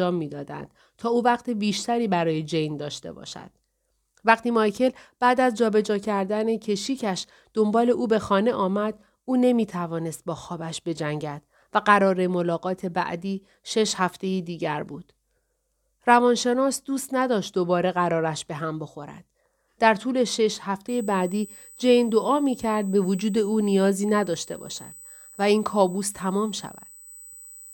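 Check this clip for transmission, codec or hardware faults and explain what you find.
One hardware fault is present. USB whine runs from 20.88 s to the end at 27.73 s: a steady, fixed-pitch tone at 8 kHz sits under the speech, roughly 25 dB below it. The bus services its 125-microsecond microframes eight thousand times a second, and each burst of current draw leaks into the audio path through shared power or ground. The result is a thin, high whistle that holds its pitch regardless of what is being said.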